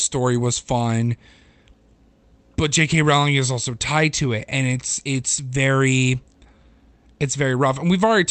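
Nothing is technically wrong with this speech recording. It has come through a WebRTC call path, and the top end stops at about 8 kHz, which fits an Opus call codec running at around 32 kbps.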